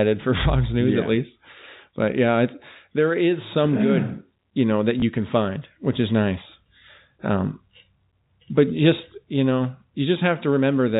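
At 5.0 s, between "good you know that" and "can find which is", packet loss with the last packet repeated replays one 20 ms block. It sounds like a small blip and shows as a duplicated waveform segment and a thin vertical line on the spectrogram.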